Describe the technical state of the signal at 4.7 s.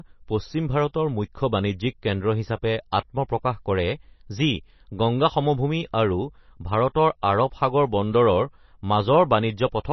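At 4.7 s the speech has the watery, swirly quality of heavy MP3 compression, likely from a low bitrate around 24 kbps, and it runs through the whole clip. The encoder has cut everything above 5.9 kHz and keeps dropping weak frequency lines frame to frame, so sibilants chirp and attacks smear.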